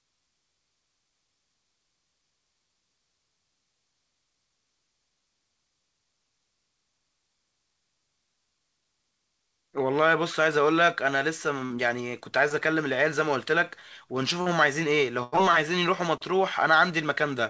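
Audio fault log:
11.66–11.72 s and 14.42–14.48 s, short concealed packet loss: each is a brief smear or wobble in the speech, as though the sound stalls for an instant. About 40 ms of audio arrived too late, so the decoder filled the hole by extending the preceding sound, then blended back.
15.24–15.34 s, burst of packet loss: a held buzz or fading hiss lasting about 80 ms, after which the speech picks up further along with a piece missing. Several consecutive packets were lost, and the receiver stretched and attenuated the last sound across the gap. The call codec cuts off everything above 8 kHz, which fits G.722, so the filled-in sound is band-limited too.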